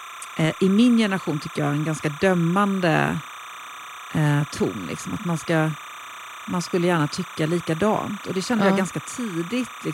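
Linear timecode at 30 frames per second bleeds into the speech throughout, a timecode bleed heard as a steady chirping warble near 1 and 2 kHz.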